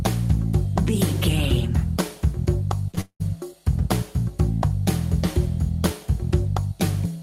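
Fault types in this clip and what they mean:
short concealed packet loss: Two back-to-back gaps of about 20 ms each, at 2.91 s and 2.95 s, where audio failed to reach the decoder in time. The receiver extrapolated from the preceding sound for roughly 15 to 19 ms in each case and then crossfaded into the incoming stream, so the pair is heard as a quick smear or flutter lasting about 75 ms rather than a clean break.
long network dropout: Starting at 3.01 s, about 200 ms of audio is absent, likely from packets lost on the network path. Concealment carries the last sound forward as a decaying buzz or hiss for most of that span, leaving around 90 ms of near-silence before the stream resumes at 3.22 s. The material that should have occupied that gap is simply missing, so playback jumps forward when the audio returns.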